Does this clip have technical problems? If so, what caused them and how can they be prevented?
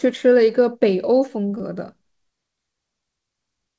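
Yes. There's a short concealed packet loss at about 1.58 to 1.61 s: roughly 20 ms of the call didn't reach the decoder in time, so the receiver patched about 16 ms of it by extending the preceding sound and then crossfading back into the real signal, which leaves a quick smear or wobble. The call path itself tops out at 8 kHz, which fits a wideband codec like G.722. To prevent it, improve network stability or give the jitter buffer a bit more headroom.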